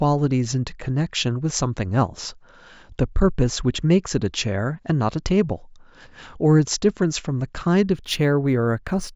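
Imaging from linear upsampling affects this speech recording from 7.93 to 9.16 s. Straight-line interpolation, which fits a 16 kHz to 44.1 kHz conversion, dulls the top and leaves faint mirror images from 8 to 16 kHz, roughly 30 dB down, heard as metallic shimmer.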